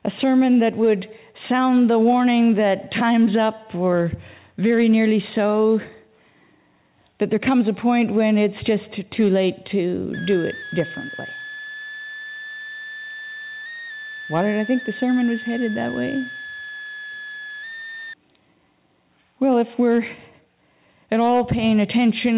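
A switching supply whistle runs from 10.14 s to 18.14 s. A switch-mode power supply has dropped into an audible burst mode, or is beating against a second supply, and its cycling leaks into the audio as a thin high whistle wandering between about 1.6 and 1.9 kHz as the load shifts. It sits roughly 15 dB below the sound and stays well inside the 4 kHz band of the G.711 mu-law call path.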